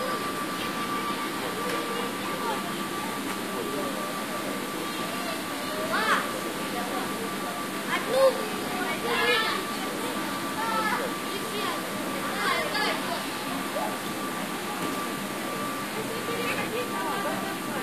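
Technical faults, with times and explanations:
No technical faults can be heard anywhere in this recording of sounds; the signal stays intact and continuous from its opening moment to its close.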